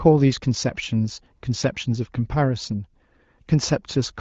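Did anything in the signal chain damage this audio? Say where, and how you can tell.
No, nothing in the signal chain damaged this speech, which carries only the light, expected character of the AMR wideband (HD Voice) codec at a higher rate, around 16 kbit/s.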